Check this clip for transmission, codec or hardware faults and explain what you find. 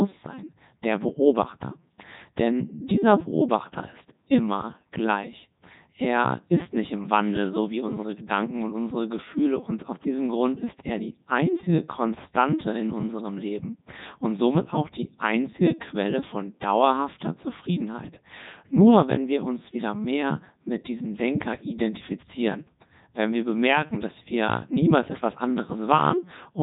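The clip has one fault, present throughout: Codec 2 vocoder coding. The decoder rebuilds the speech from pitch, voicing, energy and a spectral envelope, using sine waves, so the original waveform is lost. The result is heavily robotic and buzzy, with nothing above 3.8 kHz, which fits Codec 2's 3.2 kbit/s mode.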